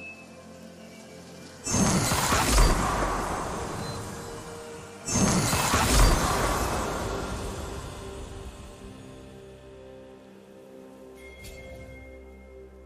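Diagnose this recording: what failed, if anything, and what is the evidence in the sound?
No failure found; nothing in the sound points to one.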